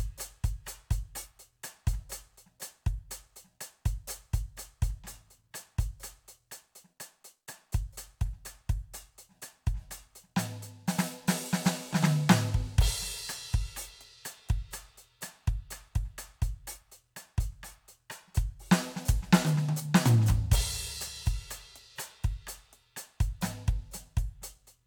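Nothing in this music clip stands out as a technical fault, so there's nothing to flag here.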